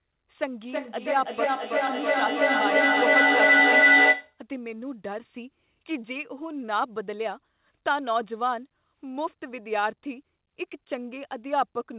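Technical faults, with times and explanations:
0.6 to 4.41 s, feedback howl: two devices in the same room joined the call, so sound from one loudspeaker re-entered the other's microphone and came back with more gain each pass. The repeats built up rather than dying away and narrowed to a tone around 2 kHz, with the loop coming round roughly every third of a second. At its loudest it stands about 9 dB above the speech, and the howl stays below the call path's 4 kHz ceiling, consistent with 64 kbps G.711 mu-law.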